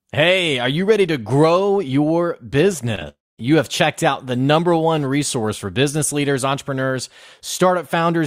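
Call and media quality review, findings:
Short concealed packet loss, 2.95 to 2.99 s, right after "ready to grow your": brief smeary wobble where the receiver's concealment stretched the last bit of sound over a missing packet of about 20 ms, then crossfaded back.

Short concealed packet loss again, 2.99 to 3.03 s, back to back with the first: another quick patched-over smear covering roughly 20 ms of lost audio, so the two run together as one longer blur.

Long network dropout, 3.09 to 3.44 s, ending just before "have checked out the": a fading buzz or hiss, then silence. Likely a network stall, with concealment dying out and about 0.3 s of audio lost.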